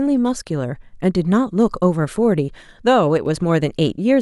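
From 3.18 to 3.26 s the speech abruptly sinks by about 6 dB, then snaps back to full level. This brief dip is likely one channel drops out: one side of the stereo pair falls silent, so the mono sum loses half its shared signal.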